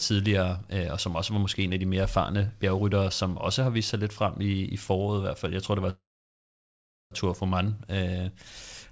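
At 5.90 s the speech halts in a call audio freeze lasting until 7.13 s, likely because packets were delayed and the jitter buffer ran dry. The receiver stretches the last sound into a short decaying buzz or hiss, then holds near silence for about 1.1 s before the speech resumes where it stopped, with nothing lost but everything after it 1.2 s later. On a spectrogram, which shows no energy above 8 kHz throughout, the band smears horizontally, then goes dark. The waveform flattens.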